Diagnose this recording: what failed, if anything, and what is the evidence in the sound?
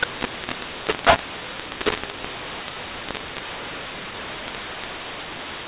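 The codec stage is where this broke: a mu-law and A-law mixup, with mu-law G.711 samples decoded as A-law for the whole clip. Levels come out scrambled, so the speech sounds harsh and gritty, and pauses fill with noise because near-silent codes land well above zero.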